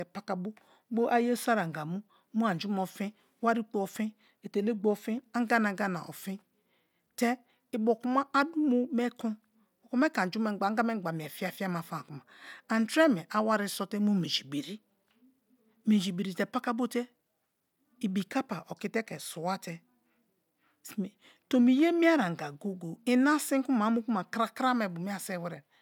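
No audible technical faults.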